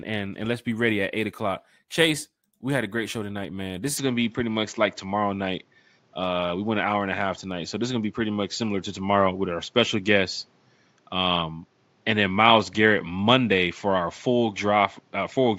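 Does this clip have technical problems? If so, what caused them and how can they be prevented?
Yes. At 3.97 s the speech suddenly loses its top end, and it stays that way to the end. Nothing above 7.6 kHz gets through, so the sound turns duller and boxy. The level shifts by a few decibels. A new, faint background noise appears. There is no gap at the change. This points to the input switched to a poorer device, likely another microphone or a headset's call profile. Lock the input device in the system settings before recording.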